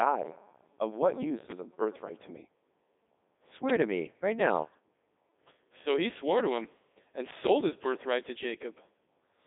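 Codec 2 vocoder damage runs throughout: the speech is rebuilt from pitch and envelope sines at about 3.2 kbit/s, sounding robotic and buzzy, with nothing above 3.8 kHz.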